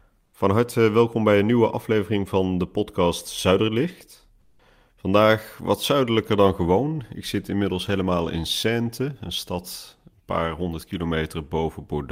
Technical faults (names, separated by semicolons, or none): comfort noise in place of the background